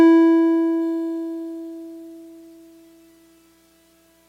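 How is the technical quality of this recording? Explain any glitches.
From 0.82 s to the end, the music carries a gritty, inharmonic fizz that rises with the loud and bright passages. This is crude rate conversion. Individual samples appear to have been repeated to stretch the stream to a higher rate, without any filtering, which fits a change from 44.1 kHz to 48 kHz. The repeats fall in a fixed cycle set by the two rates, creating shifted, inharmonic copies of the music, roughly 35 dB below it.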